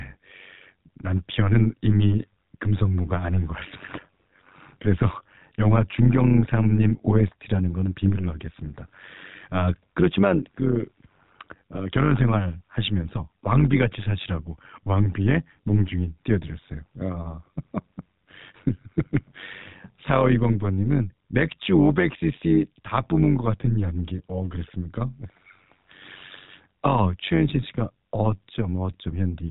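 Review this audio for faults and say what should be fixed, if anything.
Overlap-add ripple runs through the whole speech clip. The level swings by about 11 dB at a rate of around 100 Hz, giving a metallic buzz with extra tones around each note. The frames were windowed and summed back with an overlap whose windows don't add to a constant gain, so the loudness dips and peaks once per frame. On a waveform the envelope shows a regular comb of bulges. On a spectrogram there are vertical striations, with sidebands spaced about 100 Hz either side of each harmonic, all under the narrowband cut-off at 4 kHz. To prevent it, use a window and hop size that satisfy the constant-overlap-add condition, such as a Hann window at 50% overlap, or normalise the output by the summed window.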